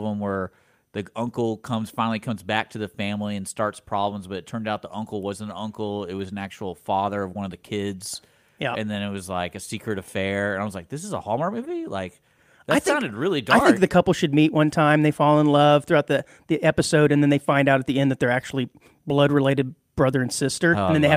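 Nothing technical stands out in this speech recording; there's no fault to point to anywhere in it.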